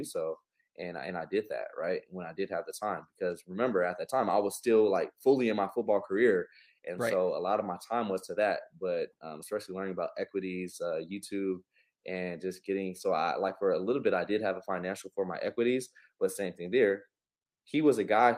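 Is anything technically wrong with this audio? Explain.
No, nothing in the signal points to a technical problem at any point in the recording.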